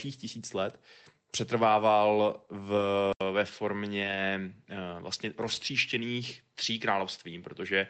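A speech recording carried over a call path whose Opus coding, consistent with about 24 kbps, already caps the band near 8 kHz, and it contains two kinds of fault. The first is a lost packet rebuilt from error correction, heard three times: 2.77–2.83 s, 4.03–4.17 s and 5.47–5.61 s. Each span is 40 ms, 80 ms and 80 ms of sound that turns briefly rough and grainy with no gap. This points to the decoder filling the holes from the lower-quality redundant copies carried in the following packets, roughly two, four and four packets' worth. On a spectrogram these appear as short vertical strips of smeared, noisier texture, and the waveform stays continuous through them. The second is an input switched to a poorer device at 3.13 s, likely a change of microphone or headset profile. An 80 ms silence marks the switch, visible as a flat gap in the waveform. From there to the end, nothing appears above 7.6 kHz, so the spectrogram's upper edge drops slightly, and a faint new noise floor about 50 dB below the voice fills the pauses. 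Loudness stays roughly the same, but the tone changes.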